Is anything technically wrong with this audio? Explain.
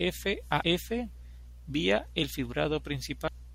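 Yes, there's damaged data in the compressed stream, twice: at about 0.62 s and again at 3.28 s. Corrupted bytes make the decoder misread those frames and lose sync while it hunts for the next header, so each spot comes out as a brief glitch in the speech.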